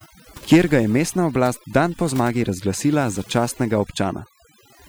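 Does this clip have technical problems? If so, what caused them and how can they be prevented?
Yes: overdone noise removal, set too strong, cuts frequency bands near its noise estimate throughout, leaving twinkling specks in near silence. Use gentler reduction settings.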